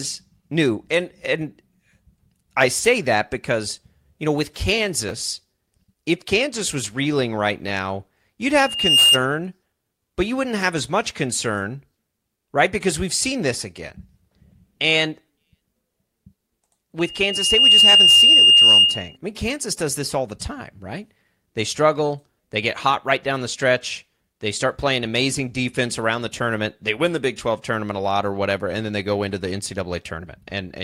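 Speech with loudspeaker feedback squeal in two spots: a tone at 2.8 kHz swells up from 8.55 to 9.20 s, right after "reeling right now you'd", then again from 16.99 to 19.17 s, climbing more slowly there. The mic's catching its own speaker, the loop gain tops one at that pitch, and it ends up around 10 dB over the speech.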